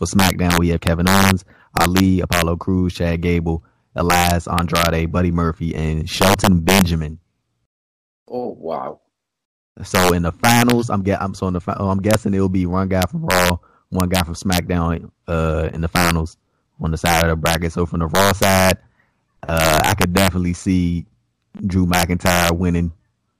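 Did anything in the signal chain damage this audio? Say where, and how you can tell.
Yes. A fixed-point gain or sample-format conversion stage let loud peaks wrap instead of saturating, which is integer overflow. Driven about 4 dB past full scale, the few peaks over the limit flip to the opposite extreme, producing sharp cracks on loud speech throughout.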